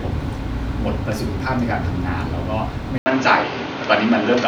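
At 2.98 s there's an 80 ms gap, then the speech turns duller with nothing above 6.7 kHz and a faint new noise floor, likely the input switched to a poorer device.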